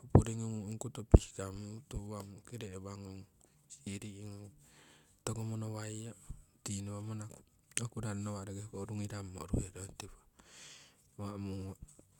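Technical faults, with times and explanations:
No technical faults are audible anywhere in this speech.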